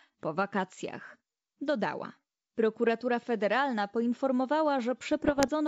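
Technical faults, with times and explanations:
5.12 to 5.49 s, bit errors on an ADPCM link: near the end of the speech, flipped bits in the G.722 stream, at an error rate of roughly 0.4 percent, produce pops and rough, gritty bursts with brief jumps in level. Each corrupted code also knocks the decoder's adaptive step size and predictor off track, so the damage smears on for some milliseconds instead of ending as a single click. That trailing roughness sets it apart from plain dropouts or isolated clicks. The G.722 coding itself is working at 64 kbit/s, and its upper band stays clear up to about 7 kHz.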